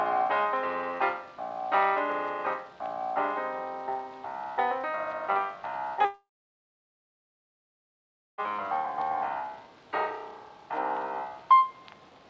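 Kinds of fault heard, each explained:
long network dropout: At 6.05 s the sound turns into a short, fading buzz, then falls silent for 2.1 s. It returns at 8.41 s, with 2.34 s of audio gone. Packets likely stopped arriving, and the receiver briefly stretched the last sound before giving up.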